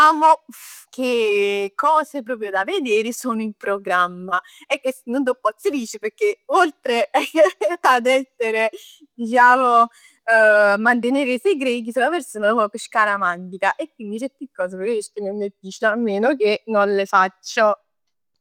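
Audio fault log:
No audible faults were found anywhere in this recording.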